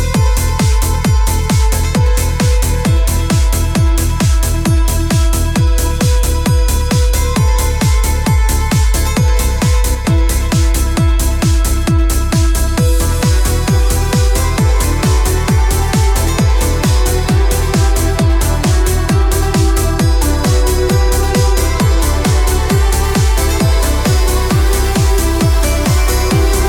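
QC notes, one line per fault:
9.95–10.05 s, sudden gain jump: sound and background noise drop together by about 5 dB in one step, likely a digital gain change applied without a ramp.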